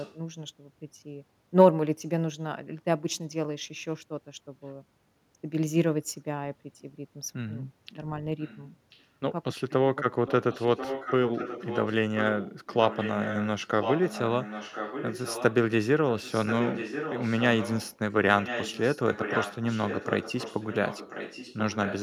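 Echo leak appears at 0.0 to 0.14, 8.4 to 8.58 and 8.9 to 9.06 s as faint scraps. It returns far louder at 10.27 to 11.95, 12.17 to 14.22, 14.4 to 15.55, 16.18 to 17.97 and 18.41 s to the end. A copy of the speech follows about 1.04 s behind. A loudspeaker echo canceller likely missed it.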